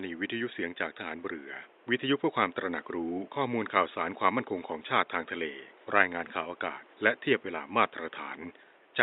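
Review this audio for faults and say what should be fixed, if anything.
Nothing here needs fixing; no faults were found.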